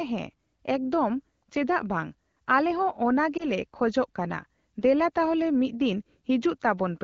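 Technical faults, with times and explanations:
3.37 to 3.46 s, lost AMR speech frames: a single 20 ms wideband frame failed its radio checksum, so the decoder repeated the previous pitch and vocal tract settings at reduced gain, giving a brief dip or warble before the HD Voice speech resumes.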